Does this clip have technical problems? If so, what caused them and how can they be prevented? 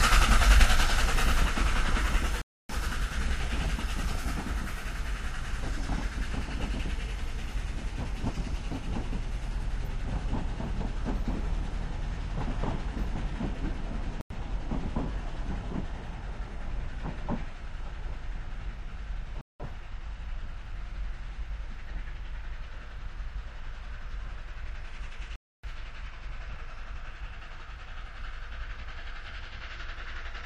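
Yes, there are four blocks of digital silence: 2.42 to 2.69 s, 14.21 to 14.30 s, 19.41 to 19.60 s, and 25.36 to 25.64 s. They last about 279, 93, 186 and 279 ms, so they come across as short holes where the audio drops out and snaps back with no fade. Those lengths fit whole multiples of a 4096-sample buffer at 44.1 kHz. That points to the program missing its deadline to fill the output buffer, so the buffer went out empty. To prevent it, use a larger buffer or give the audio thread higher priority so it never runs late.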